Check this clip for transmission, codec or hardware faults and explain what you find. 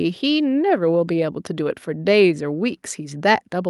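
No faults detected here.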